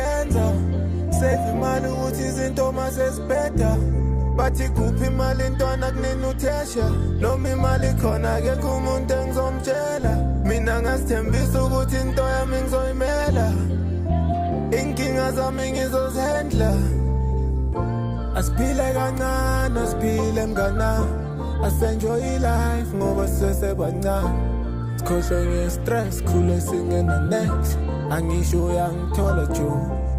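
There are no technical faults to describe in time order.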